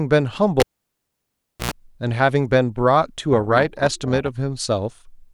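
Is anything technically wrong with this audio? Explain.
Yes, two separate problems.

From 0.60 to 1.71 s there's a cable pulled and plugged in while the line was live. You get a pop, then about 1.06 s of near silence with the connection gone. As the plug goes back in, the tip touches before the rest of the jack seats, so for about 91 ms there's a 60 Hz mains buzz. Then a second pop as the speech comes back.

From 3.33 to 4.29 s there's overlap-add ripple. The audio was split into windowed frames and reassembled with an overlap whose windows don't add up to a flat gain, so the level dips and swells once per frame, about 6 dB deep. The frame rate sits somewhere around 300 Hz, which makes the speech sound metallic and buzzy, with extra tones around the voice.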